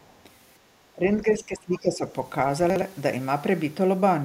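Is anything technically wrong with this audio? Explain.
Yes, there are three faults in this speech clip.

From 0.02 to 0.13 s, a very faint second voice is heard, likely the other side's voice leaking through an incomplete echo canceller. Unlike reverberation, it isn't a tail of the talker's own voice.

Between 0.94 and 2.13 s, the speech sinks by roughly 15 dB for about a second in total. This is likely speech suppressed in double talk. Unlike a dropout, it's attenuated rather than silent.

From 2.70 to 2.82 s, there are chunks out of order: a 60 ms piece plays one chunk late, giving a jumbled moment. Unlike a dropout, nothing is missing.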